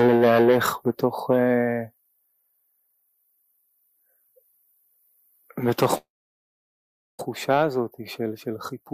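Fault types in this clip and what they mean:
Long network dropout: From 5.97 s to 7.21 s the sound breaks off. The last moment is briefly carried on as a fading buzz or hiss, and then about 1.1 s of near-silence follows. It resumes at 7.21 s with roughly 1.2 s of material skipped, likely because packets stopped arriving. On a waveform this is a short decaying tail and then a flat stretch. A spectrogram shows a smeared, fading band and then an empty gap.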